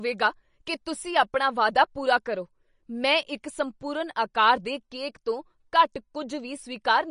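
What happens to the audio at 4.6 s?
At 4.6 s the speech carries the watery, swirly texture of MP3 compression heard throughout the clip, likely from a low bitrate near 40 kbps. Starved of bits, the encoder removes everything above 10.6 kHz, a flat ceiling on a spectrogram, and drops weak frequency lines that flicker on and off between frames.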